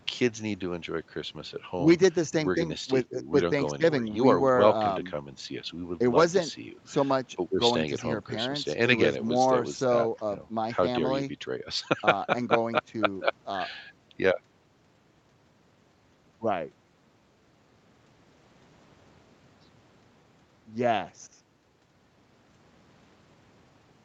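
Speech carried over a call microphone chain and a WebRTC call path, with content stopping at about 8 kHz as that path delivers it, and no faults to report.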